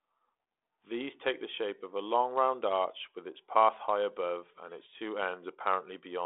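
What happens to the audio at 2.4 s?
Nothing goes wrong at 2.4 s: the speech carries on intact, with only the narrow telephone band of the G.726 ADPCM path that runs through the whole recording.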